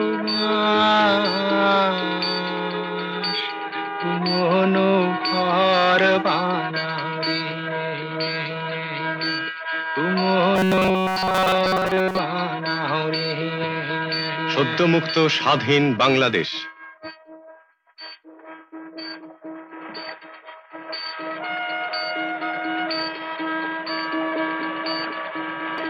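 From 10.55 to 12.19 s the sound collapses into a rigid, metallic buzz pitched at 188 Hz, with the original material only loosely tracking underneath. This is robotic sound from repeated short buffers. The likely cause is new audio arriving too slowly, so playback loops a fragment of about 5.3 ms over and over, roughly seven parts in ten of that stretch. The real audio in those gaps is skipped, and the fixed repeat rate imposes its own 188 Hz pitch.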